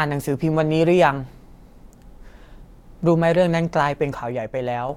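From 4.22 to 4.89 s, one stereo channel likely drops out, so after the mono sum the shared speech abruptly falls about 6 dB, then returns.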